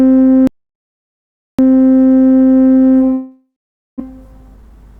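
A recording of everyday sounds with three transmission and capture faults. From 0.47 to 1.59 s there is an audio dropout to silence, most likely from the input being lost, through a disconnected device, a failed link or a mute, while the recorder kept writing silence. The sound cuts off abruptly into dead silence with no room tone at all, then resumes mid-flow, and roughly 1.1 s of whatever was happening is simply gone. From 3.13 to 4.02 s comes a long network dropout, likely packets failing to arrive for an extended stretch. The receiver papers over the hole by extending the last sound as a fading buzzy, hissy continuation, which gives way to around half a second of silence before real audio returns. About 0.6 s of the original never plays, and the sound picks up further along than where it stopped. That stall also leaves the playback delay around a fifth of a second longer than intended. 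From 4.10 to 4.98 s a jitter buffer speed-up works that excess off. The receiver snips out many short slices of a pitch period or so each, about a tenth of a second in total. The sounds run at roughly 111% speed with unchanged pitch, so they come across as hurried and compressed in time.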